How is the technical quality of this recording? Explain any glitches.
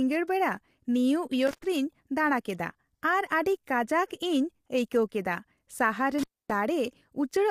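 The technical quality is compromised: the speech carries plainly audible coding damage throughout, and the signal drops out twice.

The whole clip sounds rough and grainy, with a hazy noise floor filling the gaps between the voice's harmonics and a top band that sounds thin or synthetic. This is likely low-delay AAC compression of the AAC-ELD kind used in video calls. Its short frames cannot separate closely spaced pitch harmonics well and spend bits quickly, and the damage here fits a low bitrate of around 32 kbps. On a spectrogram the harmonic stripes look smeared and speckled, and the upper region looks patchy rather than detailed.

The two dropouts come from an intermittent contact, where a loose plug or cable briefly breaks the connection. The first runs from 1.47 to 1.66 s, with the line open for about 0.11 s. The second runs from 6.19 to 6.55 s, open for about 0.26 s. Each one has a crackle as the contact breaks and remakes, with faint hiss in between. 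On a waveform this shows as a sudden collapse to near-flat, bracketed by sharp spikes, and on a spectrogram as vertical broadband streaks around a dark gap.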